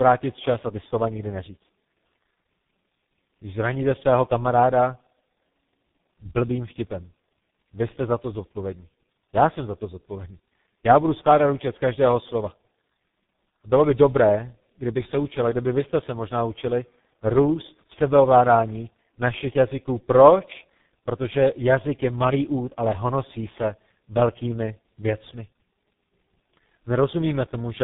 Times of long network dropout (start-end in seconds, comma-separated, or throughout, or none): none